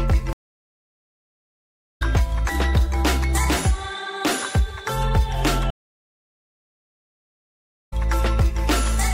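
At 0.33 s the stream drops out for about 1.66 s, then picks up again at 2.02 s. That's a stream reconnect: the player lost its connection, went quiet, rejoined and started a fresh decoder. It lands roughly a second and a half further on, so a chunk is simply skipped. Same thing again from 5.70 to 7.93 s, with a 2.2 s silence and a similar forward jump.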